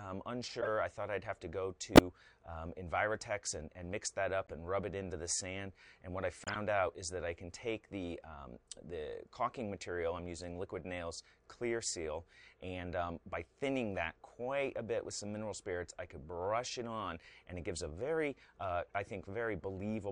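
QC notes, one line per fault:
0.61–0.68, 1.95–2.00, 4.47–4.52, 6.42–6.56, 18.86–18.91 s, corrupt frame decoded: bit-damaged frames got played anyway, throwing energy into the wrong bands as short chirpy bursts. The one near 2.0 s is loudest, about −10 dBFS. The 6.4 s one runs longest, roughly several frames. The 4.5 s and 18.9 s ones are faint.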